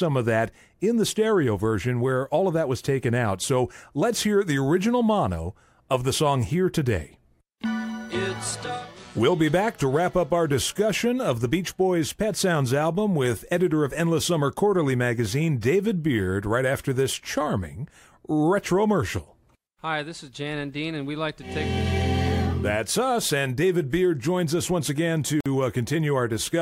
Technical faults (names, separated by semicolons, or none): gap at a join of encoded pieces